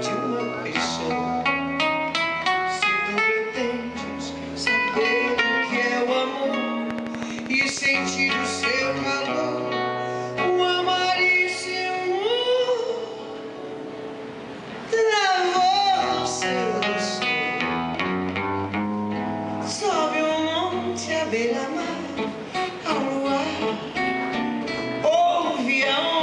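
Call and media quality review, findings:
Rapid, even ticking over the sound, 6.91–7.87 s: a train of clicks at 12.6 per second, about fifteen near-identical pulses at regular spacing, peaking about 15 dB above the signal. Likely cause: a faulty connection or power supply or nearby equipment interference injecting periodic pulses into the path.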